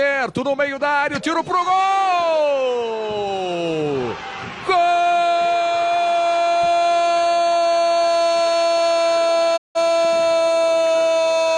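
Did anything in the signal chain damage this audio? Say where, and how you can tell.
Yes. At 9.56 s the sound fades to silence over about 20 ms and returns at 9.77 s, a hole of roughly 0.2 s. This is a digital broadcast dropout at the reception stage: the receiver muted after losing about 171 ms of signal, which fits four corrupted frames.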